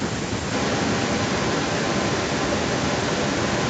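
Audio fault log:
0.52 to 3.7 s, echo leak: the speech returns 0.85 s late at roughly equal loudness, likely loudspeaker pickup that the far-end echo canceller failed to remove.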